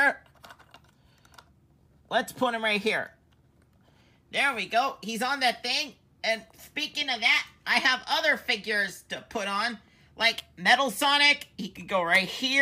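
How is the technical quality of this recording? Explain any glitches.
One glitch stands out, an electrical switching spike at 10.38 s. It is a sharp snap peaking around -20 dBFS, likely a nearby switch or discharge arcing into the line. Unlike a dropout click, it sits on top of the sound instead of interrupting it.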